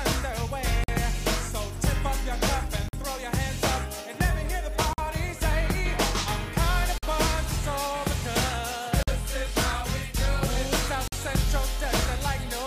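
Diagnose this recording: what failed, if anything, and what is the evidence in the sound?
Gap between chunks at 0.84, 2.88, 4.93, 6.98, 9.03 and 11.08 s: hard-edged silences of about 48 ms after every 2-second chunk, inserted at playback or storage joins.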